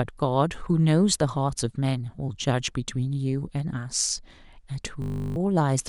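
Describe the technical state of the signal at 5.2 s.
A system hang loop runs from 5.02 to 5.36 s. The playback system stalled while the audio hardware kept replaying its last filled buffer, so a single 20 ms slice of speech repeats 17 times in a row. Repeating at 50 Hz, that slice fuses into a steady, pitched buzz rather than a stutter. Around a third of a second of the real speech never reaches the output and is replaced by the buzz.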